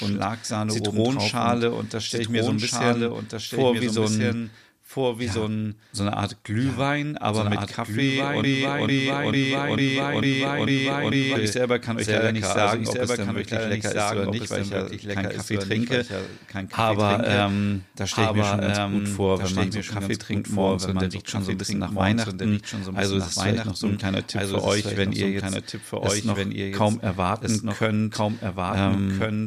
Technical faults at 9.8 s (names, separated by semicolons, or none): doubled audio track; broken-record loop